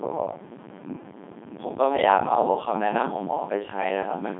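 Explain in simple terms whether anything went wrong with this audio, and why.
The speech passed through a Codec 2 vocoder, which rebuilds the voice from simple tones, so it sounds robotic, buzzy and muffled the whole way through.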